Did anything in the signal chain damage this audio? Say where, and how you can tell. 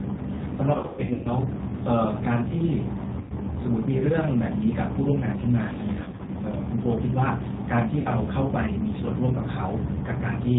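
Yes. At the codec stage, the whole clip carries G.729 coding at 8 kbit/s: nothing above 4 kHz, and a rough, synthetic grain from the pulse-based excitation. That grain separates it from a simple narrowband filter, which would dull the sound without roughening it.

At the network stage, VoIP packet loss concealed by the speech codec occurs at 0.77–1.30 s, 3.21–3.34 s, 6.04–6.31 s and 7.99–8.09 s. The first stretch has about 360 ms lost over 480 ms, with runs up to 120 ms, pointing to 30 ms packets. Unlike a plain dropout, these are buzzy, fading extrapolations rather than silence, and recovery lags briefly.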